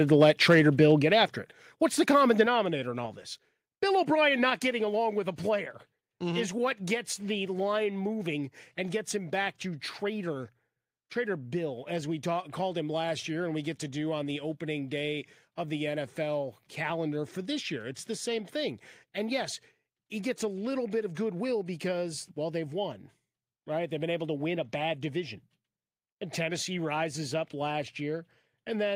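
From 0.21 to 0.84 s the loudest syllables take on a harsh, crackly edge. This is microphone overload: the peaks run about 3 dB past the converter's limit and a small fraction of the waveform has its tops flattened. The most likely cause is input volume set too high for the converter. Unlike a level step, the distortion rides only on the peaks and then fades, and the overall loudness doesn't shift.

Just after that burst, at 1.02 s, before "after it", the whole signal drops by about 5 dB in one instant. It drops again by about 4 dB at 2.46 s, between "the common" and "in all this", and by about 3 dB at 4.5 s, before "getting along with a". This is microphone volume stepped down, likely the call software cutting the device's input gain after detecting the overload. The drops are clean, with no added distortion, and the background falls along with the voice.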